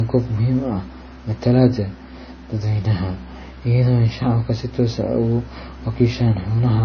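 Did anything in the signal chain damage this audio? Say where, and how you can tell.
Yes, at the codec stage, across the whole clip. The speech has nothing above 6.5 kHz at any point. The smeared, watery texture of heavy MP3 compression is present from start to finish. The file's bitrate is high, yet it still sounds this way. That points to low-bitrate audio saved at a high bitrate, likely a roughly 24 kbit/s MP3 encoded again at around 256 kbit/s. The second pass cannot rebuild the removed top end.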